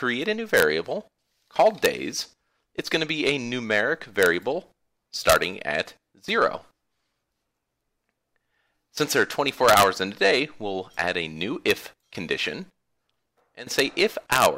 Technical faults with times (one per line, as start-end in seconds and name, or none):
0.57-0.62 integer overflow
1.85 integer overflow
4.23-4.26 integer overflow
5.29-5.36 integer overflow
9.69-9.83 integer overflow
11.71 integer overflow
13.79 integer overflow
14.32-14.46 integer overflow